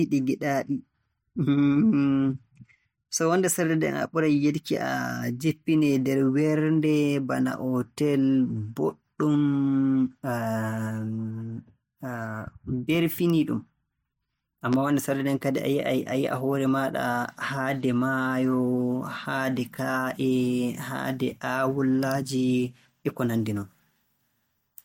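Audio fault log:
14.73–14.76 s, loud pop: a single sharp pop roughly 10 dB above the speech, which carries on underneath; likely a voltage spike from a plug, switch, static or driver glitch.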